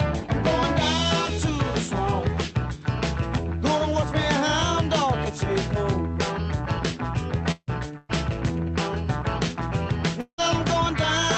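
A call recording passed through an Opus-style codec whose audio band stops near 8 kHz. From 7.51 s to 11.28 s there is repeated packet loss, giving a robotic sound. Three gaps open in that stretch. The longest lasts 175 ms. Each time, the receiver stretches the last good sound to cover the hole, roughly half a second of patching in all. About 12 percent of the span is filled this way. The result sounds choppy, with pieces missing.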